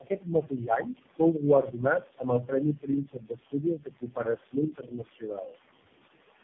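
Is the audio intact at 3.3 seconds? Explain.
No. From 2.75 to 5.56 s there's speech cut by the noise suppressor: it mistook quieter bits of speech for noise and pulled them down by up to about 19 dB, leaving them swallowed, about a second and a half in total.

On top of that, noise suppressor artifacts run throughout. The background gets pushed down by about 18 dB between words and rises back under them.

There's also tandem speech coding across the whole clip. It sounds like several speech coders in a row, each recoding the last one's damage, so it's rough, warbly and muffled, with nothing above 3.5 kHz.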